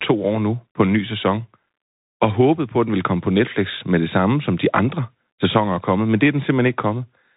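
Throughout, the speech stops at 3.8 kHz, with scratchy s sounds and granular hiss, plainly the Bluetooth CVSD headset codec's coarse one-bit delta coding.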